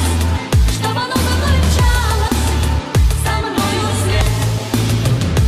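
Compressed frames skipped at 2.28 s and 4.21 s: the decoder never played a run of compressed frames, most likely because they were damaged or missing. Each time the sound jumps ahead by roughly a tenth of a second, which fits about four 26.1 ms frames.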